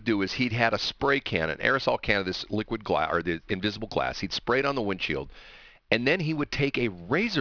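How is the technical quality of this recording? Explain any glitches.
The recording is compromised by aliasing that runs through the entire speech clip. Sibilants and other bright consonants come out gritty and metallic, and the top of the spectrum sits packed right up against a hard ceiling near 5.5 kHz. The audio was downsampled without a proper anti-alias filter first, which fits a drop to an 11 kHz rate. Energy above the 5.5 kHz fold point reflected back down as false, unrelated tones, sitting roughly 20 dB below the speech.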